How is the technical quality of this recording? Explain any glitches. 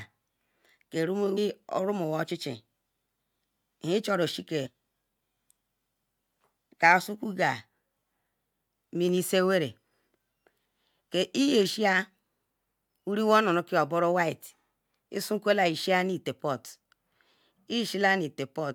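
Two brief glitches in the speech come from damaged data in a compressed stream, at 1.36 s and from 4.65 to 4.67 s. Corrupted bytes there make the decoder misread frames and lose sync until it finds the next header, producing a short chirp, squawk, click or hole.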